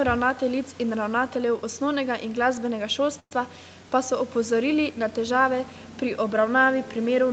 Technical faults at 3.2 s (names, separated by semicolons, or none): call audio freeze